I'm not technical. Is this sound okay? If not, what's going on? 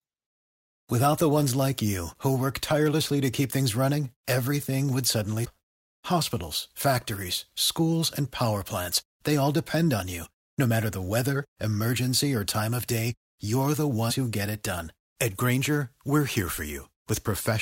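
No. Damaged data in a compressed stream causes brief glitches at about 5.44 to 5.46 s and 14.10 to 14.12 s. Some stored bits of this speech recording got corrupted, so the player briefly lost its place and produced a tiny chirp or blip.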